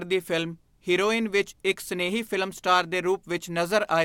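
No faults can be heard anywhere in the recording.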